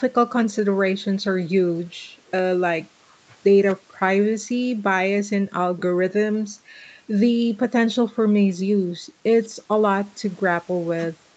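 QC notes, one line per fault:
Nothing to flag here; the speech went through a call's microphone processing and an Opus call link, so nothing sits above 8 kHz and there's the codec's usual coding character, which is just how that path sounds.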